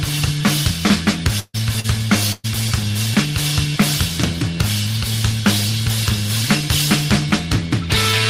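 A call recording with network damage in the first few seconds. Two bursts of packet loss, at 1.39–1.56 s and 2.32–2.46 s, drop about 140 ms and 120 ms of audio. The receiver stretches the last sound into a fading buzz or hiss that dies to silence before the audio resumes further on. The longer loss is what separates these from the concealed loss. At 1.80–1.86 s, short concealed packet loss fills a 40 ms hole with continued sound blended straight back in. It is heard as a quick smear or wobble with no silence.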